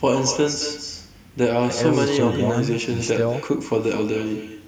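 Throughout the clip, the far end plays the call over a loudspeaker and its microphone picks it up again, with no echo canceller removing it. The result is echo with no canceller: every phrase returns roughly a fifth of a second later, about 10 dB quieter and thinner.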